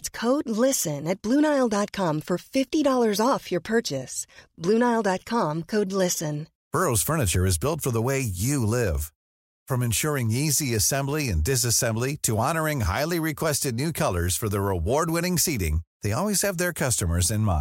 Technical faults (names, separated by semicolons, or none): none